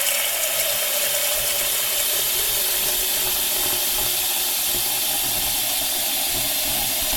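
A brief stutter at 3.67 to 3.74 s, where a 70 ms slice of sound plays twice in a row. These are repeated frames: a short run of compressed data, consistent with about three frames, was decoded a second time, lengthening the audio by 70 ms.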